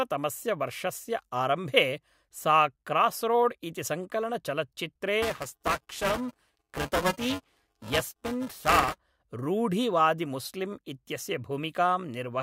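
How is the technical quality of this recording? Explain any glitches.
The speech has one fault, buffer tearing, from 5.22 to 8.98 s, between "सा क्रास्रोड् इति संकलनचलच्चित्रे" and "रूढिवादिमुस्लिम् इत्यस्य". The writer and the playback read point have slipped and cross inside every period, so about a fifth of each buffer replays audio a few milliseconds old. Each splice has hard edges, giving a robotic rattle at 375 Hz, which fits a 128-sample buffer. Unlike isolated dropouts or clicks, it buzzes steadily and follows the signal.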